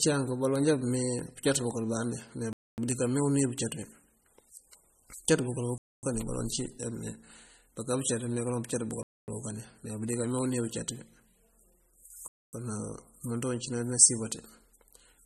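Throughout the speech, audible MP3 compression, likely from a low bitrate near 32 kbps, leaves a watery, swirly texture; a spectrogram shows nothing above 13.2 kHz and flickering high bands.

Gaps between chunks open at 2.53, 5.78, 9.03 and 12.28 s, each lasting 250 ms after roughly 3 s of audio. They sound like short holes and show as flat silent stretches in the waveform.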